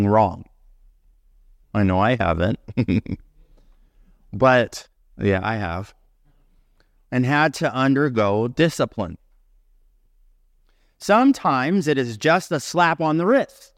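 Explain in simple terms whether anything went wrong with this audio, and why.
Nothing went wrong: listening across the whole speech recording turns up no dropouts, clicks, distortion, glitches or other faults.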